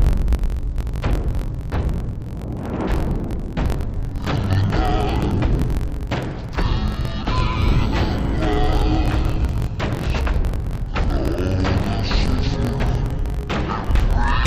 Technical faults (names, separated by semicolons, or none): interleaved audio read as planar